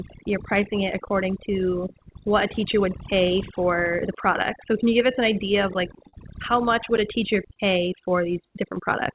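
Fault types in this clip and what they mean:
Overdone noise removal: A noise reduction stage was set far too aggressively, so it pushes individual frequency bands down or off whenever they come close to its idea of the noise floor. In this clip that makes the background in the pauses drop and break up into twinkling specks, and it strips away the softer parts of the speech.
Clock drift between sender and receiver: The sending device's audio clock runs about three percent slower than the receiver's, so the receiver's jitter buffer keeps draining faster than it is refilled. To stay in step, the receiver has to keep stretching or padding the audio throughout the clip. That steady mismatch sits behind the recurring small timing irregularities you hear from start to finish, rather than any single event.
Repeated timing corrections: Because the sender lags, the receiver keeps inserting short extensions to stay in step, all in the same direction and at uneven intervals from about 0.15 s to 9.03 s. 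Together they slow playback to roughly 98 percent speed and add something like 150 ms overall. Each edit is small, so they come across as faint hiccups and a slightly unsteady, dragging pace rather than clear glitches.
Scattered short gaps: Around ten packets arrived late or not at all between about 0.62 s and 5.02 s. Each time, the receiver covered the hole by continuing the last bit of sound, so nothing is actually lost. The patches total roughly 70 ms, and none is longer than about 15 ms. They show up as brief ticks or tiny smears in the speech, heard within the 4 kHz ceiling of the G.711 call codec.
Short stall from a late packet: Twice a packet missed its slot, the jitter buffer ran empty, and the receiver held the last sound until the packet arrived, then picked up from the same point. The first stall, at 6.09 to 6.15 s, stretches the sound by 41 ms. The second, at 7.54 to 7.58 s, stretches it by 21 ms. 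Each is heard as a momentarily held sound with a slight buzz or dip.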